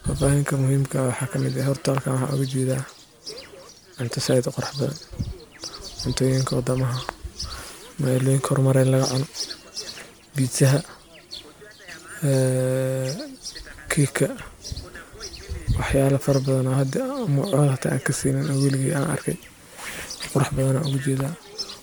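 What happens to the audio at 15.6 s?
At 15.6 s the speech carries generation loss, as it does for the whole clip. The sound is swirly and hollow. Consonant attacks are smeared rather than crisp. That is more damage than a single pass at this quality would cause. The likely cause is repeated lossy encoding, around seven passes, which fits an MP3 chain at 128 kbit/s. Each pass requantises on a shifted frame grid, so noise and spectral gaps accumulate. Nothing is present above 20.1 kHz.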